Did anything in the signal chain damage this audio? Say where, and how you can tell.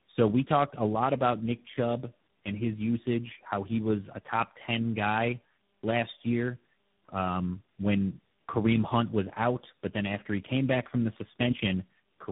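Yes, at the codec stage: tandem speech coding across the whole clip, with roughly three lossy speech coders in a row, consistent with GSM full rate, AMR-NB and G.726 links. Each one re-encodes the previous one's damage, so the speech is rough, muffled and warbly, with nothing above 3.8 kHz.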